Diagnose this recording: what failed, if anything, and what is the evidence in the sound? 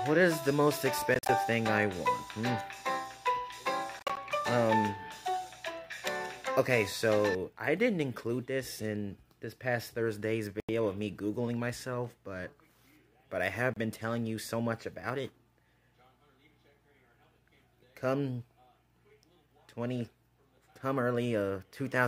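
The failure sits at the playback end, most likely a Bluetooth dropout on the wireless link. The sound cuts to silence in short holes at 1.14–1.29 s, 3.99–4.17 s, 10.60–10.69 s and 13.74–13.77 s. The first two are broken up: about 87 ms of sound goes missing, scattered over 145 and 174 ms, with gaps up to 44 ms. Each time it picks up further along, as if it had kept playing. That pattern fits a handful of packets arriving too late and being thrown away.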